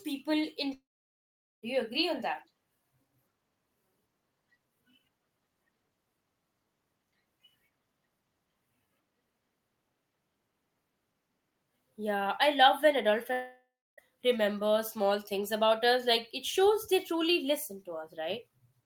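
Speech clip with two gaps, at 0.73 to 1.64 s and 13.33 to 13.99 s (between "I love when adult" and "remember small things about"), where the last sound smears into a fading buzz, then silence. That's likely a long network dropout, with about 0.9 s and 0.65 s of audio never arriving.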